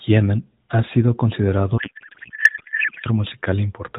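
From 1.78 to 3.07 s, right after "ha sido considerado", a codec payload misread replaces the speech with garbled, warbling noise. Octet-aligned AMR frames are being unpacked as bandwidth-efficient ones, so fields land in the wrong places. On a spectrogram, smeared, formantless energy replaces the harmonics, still capped near 4 kHz by the narrowband AMR path, and the waveform envelope stops tracking syllables.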